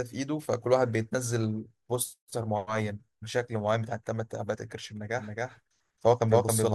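From 5.18 s on, a doubled audio track: an equally loud copy trails about a third of a second behind, starting abruptly with none of an echo's decay, likely from a second capture path.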